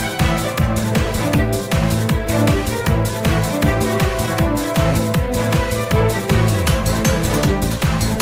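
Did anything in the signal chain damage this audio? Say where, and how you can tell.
Yes. Clock drift between sender and receiver arises at the network jitter-buffer stage. The sending device's clock runs slow, by something like one and a half percent, so audio arrives a little more slowly than the receiver plays it out. The buffer keeps draining, and to avoid running dry the receiver has to pad the stream. The result is small, unevenly spaced timing hiccups that persist through the whole clip.

Those repeated timing corrections run from about 0.10 s to 8.18 s. Each edit repeats a short piece of audio rather than cutting one, so playback comes out at roughly 99% speed, and the total added duration is around a tenth of a second. The edits all push in the same direction but are irregularly spaced, heard, if at all, as slight stutters and a faintly unsteady tempo rather than clean dropouts.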